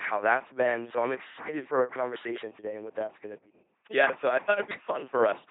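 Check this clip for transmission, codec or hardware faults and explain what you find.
The speech carries one codec fault throughout: LPC-10 vocoder coding, heavily applied. The whole clip is resynthesised rather than transmitted as a waveform. Each frame is reduced to a short all-pole vocal tract filter excited by either a pulse train or noise, with no mixed excitation. This gives a buzzing, mechanical robotic voice, with stray buzz or hiss where voicing is misjudged. Nothing is present above 3.8 kHz, and the character fits a 2.4 kbit/s LPC-10 stream.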